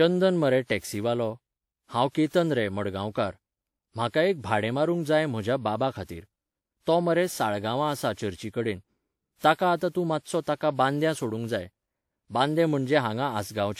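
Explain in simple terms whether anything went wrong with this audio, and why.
The speech sounds swirly, smeared and hollow from start to finish, with the starts of sounds blurred rather than crisp. The likely cause is generation loss: the recording seems to have been squeezed by a lossy format and unpacked again, around five times over. Each round rounds things off in slightly different places, so the damage stacks up. A single pass at this quality would not sound this swirly.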